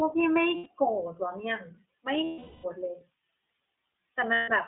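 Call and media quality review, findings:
Throughout: band-limited, slightly rough and synthetic speech, nothing below about 200 Hz or above 3.7 kHz, damage plainly audible. iLBC codec, narrowband; per-frame independent excitation coding, consistent with the 15.2 kbps mode using 20 ms frames.

0.56–0.67 s, 2.24–2.66 s, 4.34–4.50 s: held, buzzy-breathy vowel replacing speech, about 100 ms, 400 ms and 140 ms. Lost iLBC frames; decoder concealment repeats the last pitch cycle plus noise, fading on the longest gap. Clean recovery immediately after each.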